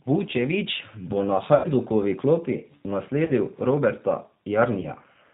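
Throughout, the speech carries the sound of the G.729 codec at 8 kbit/s, and the damage is plainly audible. The codec rebuilds each 10 ms frame from a vocal tract filter, a pitch predictor and a few pulses, so the speech comes out slightly rough and synthetic. On a spectrogram, nothing shows above 4 kHz, and the harmonics look smeared and grainy rather than cleanly striated.

Three episodes of VoIP packet loss concealed by the speech codec follow. The first runs from 1.55 to 1.68 s, just after "bo na", and is consistent with about 90 ms of lost audio. The second, from 3.25 to 3.32 s, fits about 30 ms lost, and the third, from 4.82 to 4.86 s, fits a single 10 ms frame. In each, the decoder stretches the last pitch and filter into a buzzy tone or coloured noise that fades. The spectrogram shows a frozen spectrum with decaying energy, and the waveform shows a shrinking envelope before the speech recovers.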